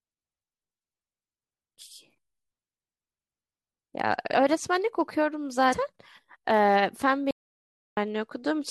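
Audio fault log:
5.72–5.74 s, compressed frames skipped: the speech jumps ahead by roughly 150 ms, around seven frames of about 21.3 ms each, gone from the stream.
7.31–7.97 s, audio dropout to silence: the speech cuts out for about 660 ms into dead digital silence with no room tone at all, then comes straight back. Whatever was said there is lost. The likely cause is the input briefly disconnecting or muting while recording carried on writing silence.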